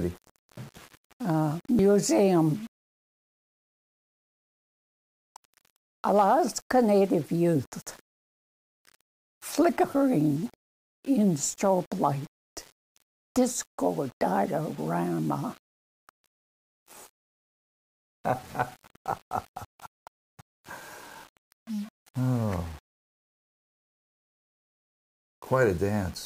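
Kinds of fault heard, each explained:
Low bit depth without dither: grainy distortion that follows the sound throughout, gritty on quiet parts, roughly 30 dB below the signal, likely from rounding to about 6 bits without dither.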